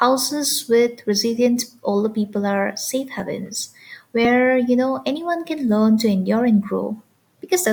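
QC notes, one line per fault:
3.2 s, dropped buffer (overrun): a jump in the speech where about 20 ms is missing, likely because the input buffer was overwritten before being read.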